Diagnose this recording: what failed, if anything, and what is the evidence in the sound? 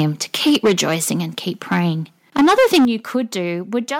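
The front end is hitting the converter ceiling. There's a brief harsh tick at 0.00 s, then a long gritty, crackling stretch from 0.34 to 0.95 s, ending just before "and keep". It returns from 1.71 to 1.80 s, right after "and keep", and is worst from 2.36 to 2.85 s, where a large share of the waveform sits flat-topped. Peaks want to go about 2 to 9 dB past full scale, so this is likely microphone overload at the input.

The level also drops abruptly three times, with the whole sound, background included, falling in a single step: about 2 dB at 0.50 s, a big one of about 11 dB at 2.85 s right as that heavy clipping ends, and about 4 dB at 3.87 s. That one-shot pattern, with the first two drops tied to the distorted peaks, points to the call software stepping the microphone volume down at the device.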